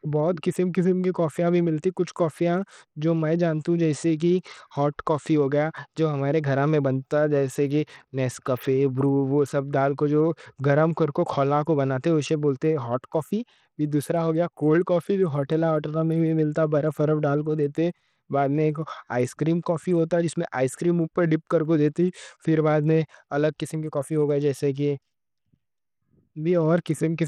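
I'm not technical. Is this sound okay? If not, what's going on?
No. Bluetooth SBC compression runs through the whole clip, from start to finish. The speech sounds like it likely passed over a Bluetooth link using SBC, a simple codec that squeezes sound into a small data allowance. It splits the sound into a few frequency bands and spends too little on the quieter, higher ones, so the crisp top end thins and flickers and a gritty, grainy edge clings to the voice. Nothing at all remains above about 18.6 kHz.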